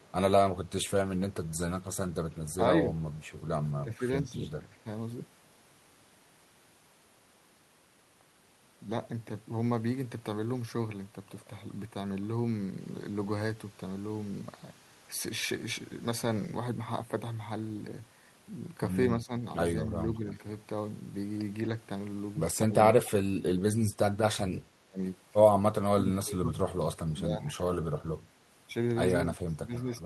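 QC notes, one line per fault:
0.0–0.09 s, echo leak: a very faint delayed copy of the speech trails it by 210 ms, well below the direct sound. This is likely loudspeaker pickup on the far side that the echo canceller failed to remove and sent back.
2.85–4.85 s, 19.22–20.26 s, 22.67–27.69 s, 29.26–30.06 s, speech suppressed in double talk: the talker's level dips in patches, by around 10 dB in the first two spans and up to roughly 20–25 dB in the last two, with about 2 s affected within 22.67–27.69 s. This is likely an echo canceller mistaking overlapping talk for echo.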